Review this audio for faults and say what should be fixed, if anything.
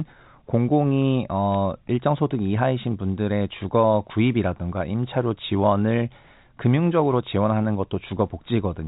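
Bit errors on a digital phone line at 1.54 s: a few G.711 A-law samples corrupted by flipped bits, over about 2 ms of the speech. Error checking on the link, or repairing the faulty line or interface, would prevent it.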